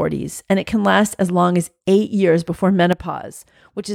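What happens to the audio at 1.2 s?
At 1.2 s the speech carries on without interruption, with no dropout, click or distortion at that point.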